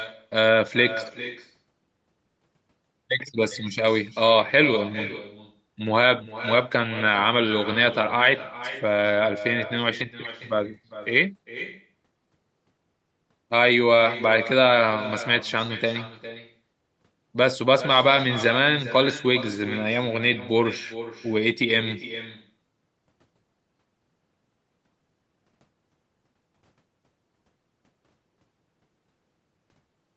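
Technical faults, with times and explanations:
Throughout: echo with no canceller. The far-end loudspeaker leaks into its microphone uncancelled, so every phrase returns roughly 0.4 s later, about 14 dB quieter and thinner. A spectrogram shows each speech burst trailed by a faint delayed copy, mirrored as small echo envelopes in the waveform.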